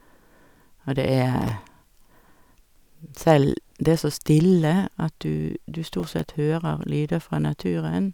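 The processor twice fell behind its very short audio buffers, dropping about ten to silence each time, producing processor overload crackle over the speech from 1.42 to 1.62 s and 5.95 to 6.24 s.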